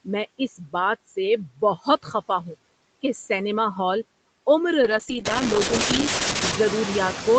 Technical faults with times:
0.00-7.38 noise suppressor artifacts
4.82-6.67 call bitrate drop

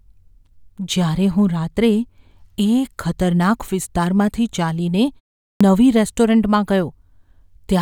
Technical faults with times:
5.53-5.61 clipped start after a pause

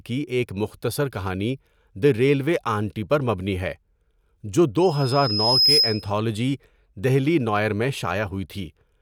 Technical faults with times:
4.81-6.12 loudspeaker feedback squeal

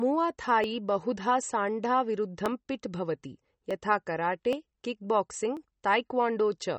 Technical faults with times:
0.00-6.79 MP3 compression
0.64 dropped samples
2.46 dropped samples
3.71 dropped samples
4.53 dropped samples
5.57 dropped samples

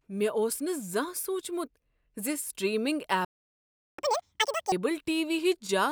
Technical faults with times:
3.25-3.99 playback stall
3.99-4.72 catch-up at higher speed

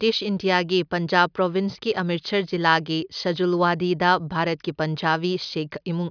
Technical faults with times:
none

